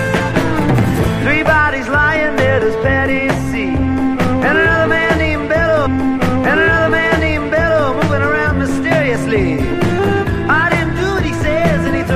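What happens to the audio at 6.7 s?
At 6.7 s the audio is replaying material already heard: from 5.85 s to 7.87 s about 2.02 s of the programme plays a second time, opening with a small blip at the jump back. This is a stream segment repeated, where the player queued the same segment twice.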